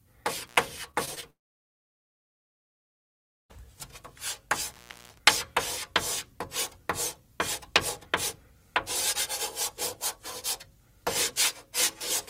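At 0.46 s an intermittent contact briefly breaks the signal path. For about 80 ms, up to 0.58 s, the sound cuts out with crackle at both edges and only faint hiss underneath, as though a plug lost and regained contact. The scratchy onset and release, and the hiss that remains while the line is open, set this apart from a network gap, where the receiver smooths the hole over rather than leaving a raw break.

From 0.91 s to 1.24 s there is repeated packet loss with a robotic sound. Four short gaps, the longest about 19 ms, each get patched by stretching the preceding sound forward. About a fifth of that stretch is made up this way, and roughly 80 ms of real audio never arrives. The quick succession of tiny concealed holes gives a choppy, robotic texture, with no crackle and no fall into silence.

Immediately after, from 1.30 s to 3.51 s, the audio disappears for about 2.2 s, likely a long network dropout. 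The last sound hangs on briefly as a fading continuation, then nearly everything goes silent until the sound resumes with the missing portion simply absent. Its length and clean silence, with no clicks, distinguish it from the contact faults.

A second intermittent contact runs from 4.67 s to 5.21 s, opening for about 317 ms. Crackle marks the break and its return, with faint hiss while the line is open.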